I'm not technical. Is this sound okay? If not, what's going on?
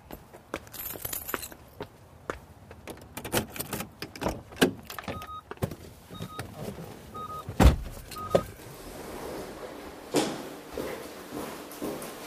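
Yes, this sound is okay, and there's nothing going on with it that needs fixing.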